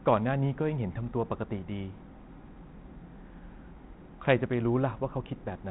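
Nothing goes wrong anywhere in this speech, which simply sits in the narrow telephone band you'd expect from G.726 at 32 kbit/s, with no dropouts, glitches or other faults to point to.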